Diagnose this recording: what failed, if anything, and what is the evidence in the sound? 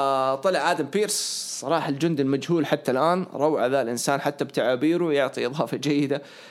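Nothing in the recording chain has failed: the speech signal keeps a steady level and unbroken timing throughout, with no audible event pointing to any stage.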